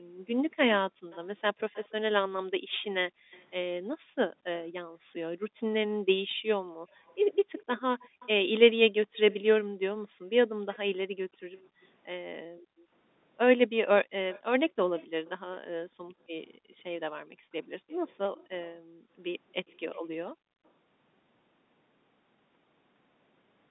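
A speech recording carried over a phone line, narrow-band up to about 3.7 kHz, with two recurring call-path faults. The first is echo leak, at 0.51–3.45 s, 6.9–11.86 s, 14.32–15.3 s and 17.88–20.7 s: a faint delayed copy of the voice comes back, delayed by 230, 250, 274 and 297 ms respectively, sitting roughly 20 to 30 dB below the direct sound. The likely cause is a far-end loudspeaker whose echo canceller let part of the signal back through. On a spectrogram it shows as weak, smeared duplicates of the speech harmonics offset a quarter-second to the right. On a waveform it is a low-level tail after each burst. The second is background gated by the echo canceller, at 0.9–1.09 s, 2.6–8.11 s, 10.08–12.91 s and 15.87–20.63 s. While the loudspeaker path was active, the canceller pulled the microphone down by about 38 to 40 dB, so the room tone dips or vanishes in brief patches totalling from a fifth of a second up to about a second and a half per stretch. 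These patches appear as sudden dark holes in the noise floor on a spectrogram and as flat near-silent gaps between words on a waveform.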